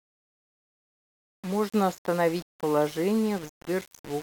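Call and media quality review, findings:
Grainy, signal-following distortion across the whole speech clip, quiet syllables and tails going rough or sputtering out. Likely low bit depth without dither: rounding to about 5 bits, error tracking the waveform, grit sitting only about 20 dB under the speech.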